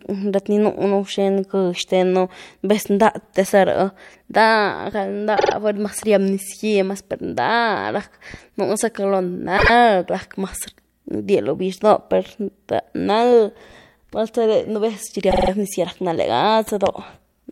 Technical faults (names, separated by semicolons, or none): repeated frames